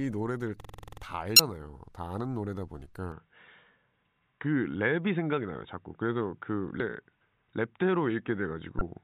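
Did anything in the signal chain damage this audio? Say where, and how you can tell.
Yes, at three stages. At the driver or buffer stage, a system hang loop runs from 0.60 to 1.02 s. A 46.44 ms slice of sound repeats nine times at 21.5 Hz, which fits a 2048-sample buffer being replayed while the host stalled. It is heard as a rapid machine-gun stutter. A waveform shows identical blocks repeating end to end. A spectrogram shows the same column pattern tiled across that span, with a comb of lines spaced 21.5 Hz apart.

At the codec, storage or transmission stage, damaged data in a compressed stream causes three brief glitches, at 1.36–1.40 s, 6.77–6.80 s and 8.78–8.81 s, each about 35 ms long. In those spots the decoder read corrupted frames and had to resynchronise, so the original signal there was lost or misdecoded. On a spectrogram each appears as a short disruption that does not match the surrounding harmonics. 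The waveform shows an abrupt break in its envelope.

At the capture stage, from 3.12 s to the end, nothing is present above 3.8 kHz. The sound turns duller and boxier, the level shifts by a few dB, and a new noise floor appears around 55 dB below the signal. There is no gap at the change. This is likely the input switching to a poorer device, such as a headset in call mode. A spectrogram shows a hard ceiling at 3.8 kHz from that point on.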